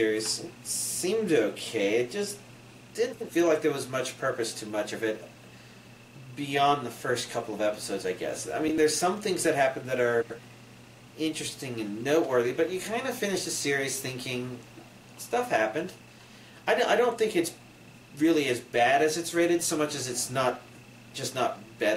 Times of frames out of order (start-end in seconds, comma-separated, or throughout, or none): 3.12-3.30, 8.67-8.78, 10.22-10.40